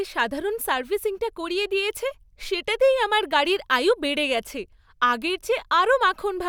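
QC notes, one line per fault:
No faults detected.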